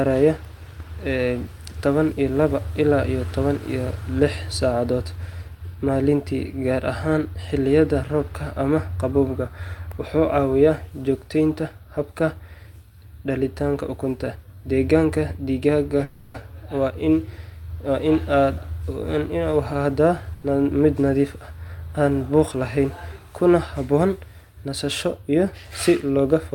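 Packets were most likely held up in transit at 16.03 s, draining the jitter buffer: a call audio freeze. The receiver bridges the hole by carrying the last speech sound forward as a fading buzzy hiss until 16.36 s, about 0.31 s of filler with no silence in it. When delivery resumes, the speech continues from exactly where it broke off, so nothing is lost, but a pause has been inserted and everything after it runs 310 ms later.

At 20.34 s one packet misses its playout deadline and the buffer runs dry again, a short stall from a late packet. For 80 ms, until 20.44 s, the receiver stretches the final sound it has, which comes across as a brief held syllable with a faint buzz. Then playback picks up at the same point, just before "mid nadiif", with nothing skipped and the delay extended by another 80 ms.

By 22.54 s the buffer holds more audio than its target, so the receiver trims it with a jitter buffer speed-up, cutting out tiny pitch-period slices in quick succession until 22.85 s. 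Roughly 40 ms is removed in total. Playback runs at about 109% of normal speed while pitch stays the same, so this stretch of speech sounds slightly rushed for about a third of a second.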